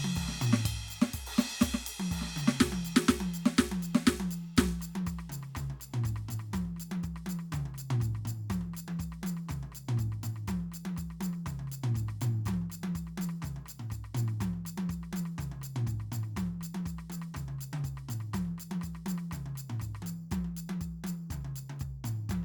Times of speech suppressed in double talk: none

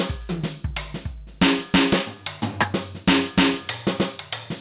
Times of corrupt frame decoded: none

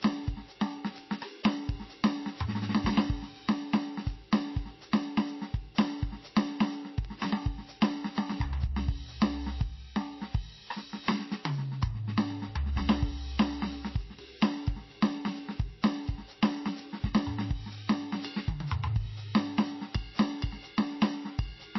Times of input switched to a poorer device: none

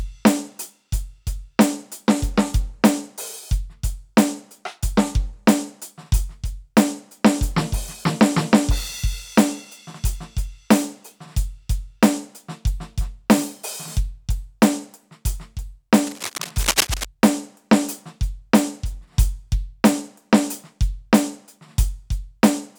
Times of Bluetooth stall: none

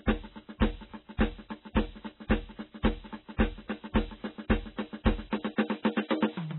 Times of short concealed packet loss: none

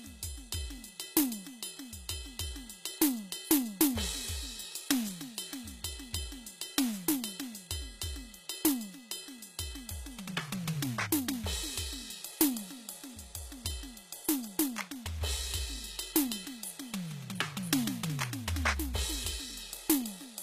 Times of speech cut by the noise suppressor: none

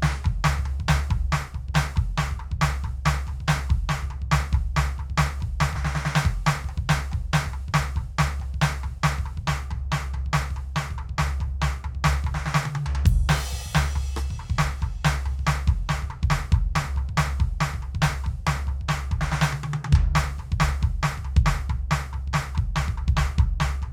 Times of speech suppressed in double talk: none

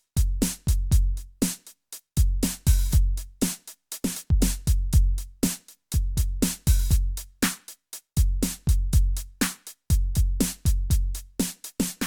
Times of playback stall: none

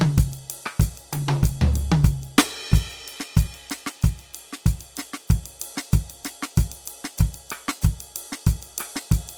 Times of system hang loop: none

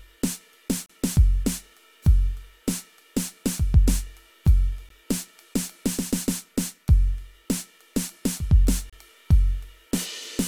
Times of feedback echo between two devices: none

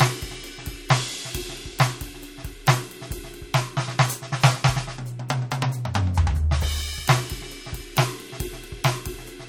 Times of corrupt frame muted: none

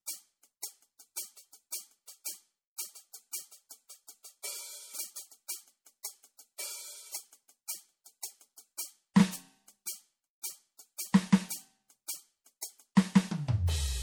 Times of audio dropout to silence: none

